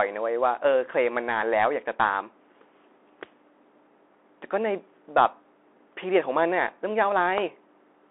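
Speech heard through a Bluetooth CVSD headset codec from start to finish. The band runs only from 300 Hz to 3.5 kHz. One-bit delta coding, which fits 64 kbps, leaves plainly audible granular distortion throughout.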